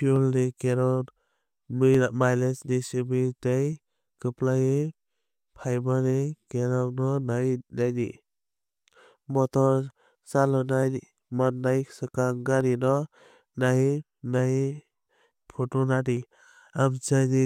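A speech recording with clock drift buffer slips. From 0.16 s to 16.17 s, a click recurs every 1.78 s, about ten times. The likely cause is two devices on separate clocks, roughly 200 ppm apart, so a buffer periodically drops or repeats about 15 samples.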